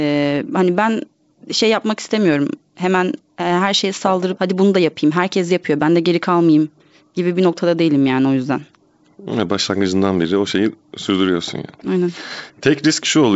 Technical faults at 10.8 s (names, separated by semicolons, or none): none